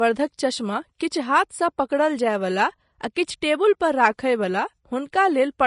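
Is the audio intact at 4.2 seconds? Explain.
No. At 4.2 seconds the speech carries damage that runs through the whole clip, likely from Vorbis compression. Nothing is heard above 10.6 kHz. The treble is quantised so coarsely that fine detail turns to grainy hiss. The damage fits a rate near 33 kbps.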